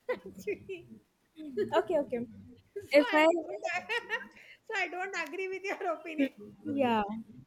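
An echo canceller that likely could not tell its own talker from loudspeaker echo while both sides spoke turns the speech down, giving speech suppressed in double talk from 2.11 to 2.25 s, a dip of about 20 dB. At 2.51 to 2.57 s, echo leak from a loudspeaker path the canceller likely failed to clear sends back a faint delayed copy, about 40 dB below the speech and trailing it by 338 ms. From 3.34 to 3.76 s the speech is likely suppressed in double talk again, sagging by about 15 dB across roughly 400 ms. Inside that stretch, at 3.53 to 3.59 s, a louder echo leak, likely uncancelled loudspeaker pickup, comes through only about 20 dB down, again 339 ms late. The last two dips are likely double-talk suppression too, deeper at about 25 dB. They turn the speech down briefly at 6.62 to 6.71 s and 7.12 to 7.36 s.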